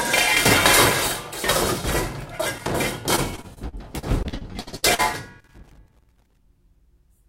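A worn or dirty contact in a loose connector makes and breaks, chopping the signal into irregular bursts of crackle and scratching from 2.58 to 2.73 s and again from 5.40 to 6.37 s. Between 3.15 and 5.00 s, repeated packet loss leaves more than a dozen short holes, the longest 60 ms. Each hole is patched by stretching the preceding sound, covering about a quarter of that stretch, so the audio turns choppy and robotic.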